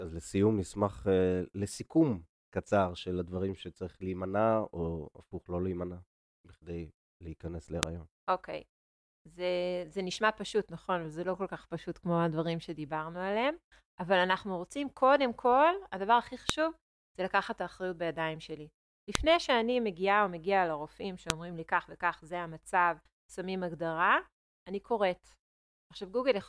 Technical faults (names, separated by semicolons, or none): file header played as audio